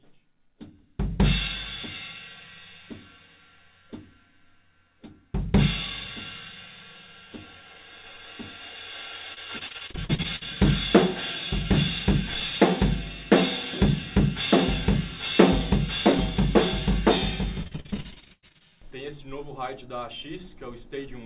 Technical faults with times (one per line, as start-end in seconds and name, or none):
9.34-10.43 repeated packet loss (robotic sound)
17.63-18.62 repeated packet loss (robotic sound)